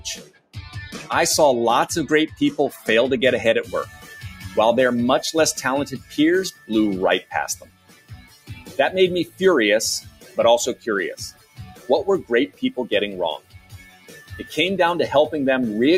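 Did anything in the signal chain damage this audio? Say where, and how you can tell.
Yes. A noise suppressor applied to music or sounds, a call-processing stage, is active throughout. It treats sustained energy and ambience as noise, so the level swings by around 15 dB. On a spectrogram, attacks stay bright while held tones and tails darken.

Sound cut by the noise suppressor occurs at 0.0–1.07 s (dropping by up to about 20 dB), 2.32–2.88 s and 3.85–4.57 s (about 9 dB), 5.96–9.41 s (about 18 dB), and 10.0–12.63 s and 13.38–14.57 s (about 17 dB). In the waveform, the envelope collapses right after onsets.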